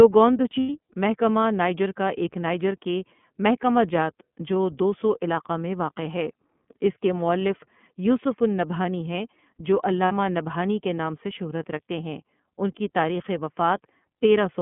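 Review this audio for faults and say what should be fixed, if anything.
The whole clip carries iLBC codec damage. The speech is confined to roughly 150 Hz to 3.4 kHz and sounds plainly rough and synthetic, which fits iLBC's 13.33 kbps, 30 ms frame mode.

Lost iLBC frames occur at 0.6 to 0.69 s and 10.05 to 10.12 s. The second falls after "النبہانی ہیں جو" and before "نبہانی کے نام سے". The decoder fills each gap with a repeated, buzzy pitch cycle. That suggests about 90 ms and 60 ms of lost audio, then quick recovery.

To prevent this, use a wideband codec with packet-loss protection such as FEC or a larger jitter buffer.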